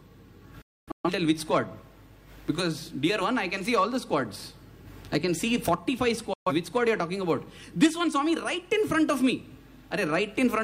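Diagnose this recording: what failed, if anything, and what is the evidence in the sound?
Digital broadcast dropout at the receiver's decoding stage. From 0.62 to 1.10 s the sound mutes in several short holes, the longest about 256 ms, and again from 6.33 to 6.52 s. Fast fades of about 3 ms show corrupted frames being muted, with their content lost.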